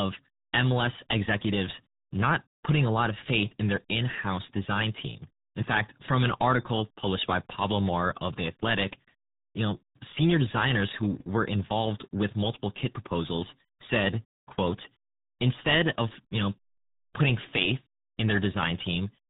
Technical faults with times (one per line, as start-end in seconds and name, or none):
0.00-19.29 RealAudio 14.4 codec